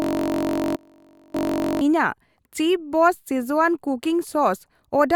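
From the very start until 1.81 s, a system hang loop is already under way. A 21.33 ms slice of the ring buffer, which fits a 1024-sample buffer, repeats exactly while the system is frozen. It sounds like a steady 46.9 Hz buzz rather than a rhythmic machine-gun stutter.

Between 0.76 and 1.34 s, inside that buzzing stretch, an audio dropout to a faint residue removes 579 ms. The wanted signal was likely lost while the downstream path stayed live. Only a faint leak remains, about 30 dB below normal, switching abruptly instead of fading like a pause.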